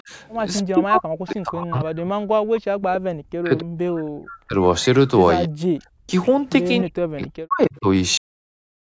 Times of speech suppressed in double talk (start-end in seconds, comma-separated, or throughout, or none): 0.03-0.08, 0.68-2.73, 3.10-4.56, 5.46-6.10, 6.83-7.86